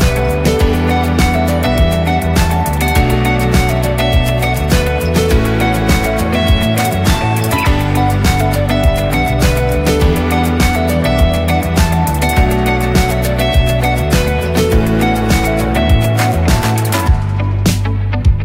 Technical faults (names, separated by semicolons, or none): none